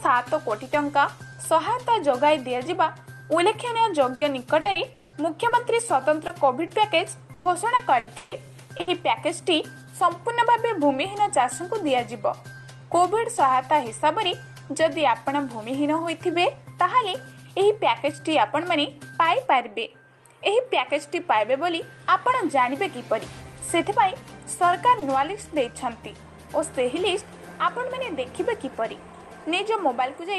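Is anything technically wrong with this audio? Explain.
Yes, there are several packet-loss faults, clustered between about 4 and 9 s, plus one at 25 s.

Burst of packet loss (4.15–4.23 s and 8.81–8.89 s): the sound freezes into a short, fading hold, then jumps ahead. About 60 ms of audio was lost each time, and the receiver filled the gap by extending the last sound.

Repeated packet loss, robotic sound (4.61–5.53 s and 7.33–8.33 s): the sound turns choppy, with pieces missing. Four gaps fall in each stretch, so roughly a third of each span is synthetic fill. The longest gaps are 200 ms and 140 ms.

Short concealed packet loss (6.27–6.31 s, 6.67–6.71 s, 8.77–8.81 s, 24.99–25.03 s): each is a brief smear or wobble where about 20 ms was patched by continuing the preceding sound. The one at 8.77 s runs directly into the second burst.

All of this sits on a call path whose high-frequency cut-off around 12 kHz points to Opus super-wideband coding.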